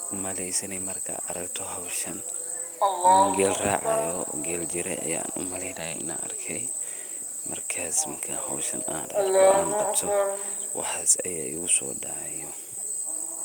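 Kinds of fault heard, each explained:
No kinds of fault are heard in the speech.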